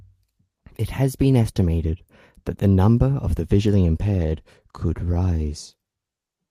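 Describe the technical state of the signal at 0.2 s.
At 0.2 s the speech signal is intact, with no audible technical fault at that moment.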